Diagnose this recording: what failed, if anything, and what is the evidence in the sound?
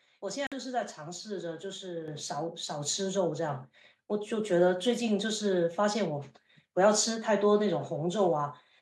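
At 0.47 s the speech drops to silence for 50 ms, resuming at 0.52 s. This is likely a Bluetooth stall on the wireless link. Radio interference delayed packets, the headphone buffer emptied, and playback halted until retransmitted audio arrived.

At 2.08 s the speech and the background noise both jump by about 7 dB in a single step. This is the microphone volume stepped up by call processing. The software judged the input too quiet and raised the device gain at once.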